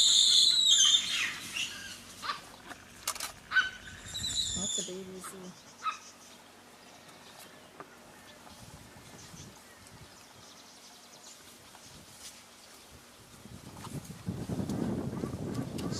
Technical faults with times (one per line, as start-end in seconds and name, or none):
none